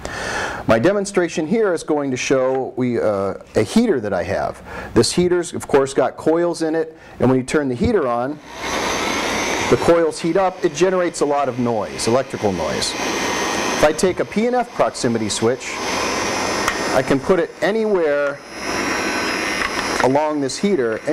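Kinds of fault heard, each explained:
No technical faults can be heard anywhere in the signal.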